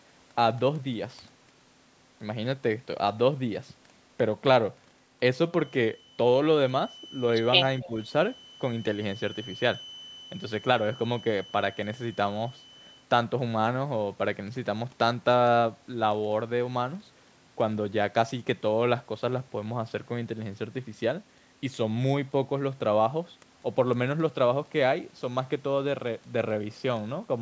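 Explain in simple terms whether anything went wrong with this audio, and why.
From 5.48 to 13.09 s a thin whistle at one pitch, around 3 kHz, sits behind the speech, a feedback whistle, likely from a loudspeaker-to-microphone loop hovering right at the edge. Inside that stretch, at 7.81–7.87 s, a faint copy of the voice arrives about 270 ms late, an echo leak, likely an echo canceller letting some loudspeaker sound slip back. Right alongside, from 7.82 to 7.95 s, the speech dips slightly for roughly a tenth of a second, speech suppressed in double talk, likely the canceller turning everything down while both sides overlapped.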